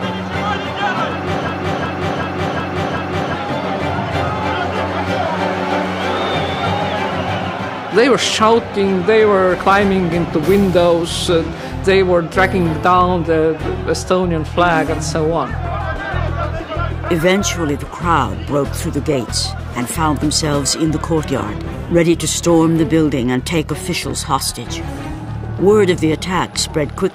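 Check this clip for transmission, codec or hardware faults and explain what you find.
One hardware fault is audible: a system hang loop. From 1.49 to 3.34 s, a 0.37 s slice repeats identically five times at 2.69 Hz, a machine-gun stutter that fits a 16384-sample ring buffer replaying while the system stalled. About two seconds of audio are lost. Unlike packet-loss concealment, every repeat is identical, with no fading or variation.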